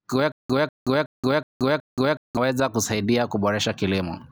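A stalled playback buffer or stream is the likely cause of the stutter with silent gaps between 0.32 and 2.37 s: each time the player retried, it replayed the last fragment it still held and then ran dry. In the speech, a burst of about 193 ms repeats five times, each followed by roughly 177 ms of dead digital silence, giving an even 370 ms rhythm. Whatever should have sounded during those two seconds is simply missing.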